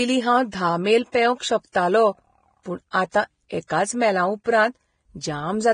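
From start to finish the speech has a hissy, grainy texture, and nothing comes through above about 9.7 kHz, so the top end just stops. Sibilants turn into rough noise instead of clean detail, and consonant attacks smear. That points to heavy Vorbis compression as the likely cause, at a bitrate low enough to fit something around 23 kbps, where the codec cuts the bandwidth and quantises the remaining treble so coarsely it becomes noise.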